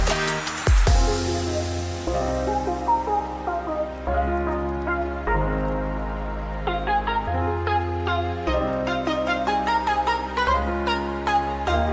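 There are no technical faults to describe, so there is no time order to trace.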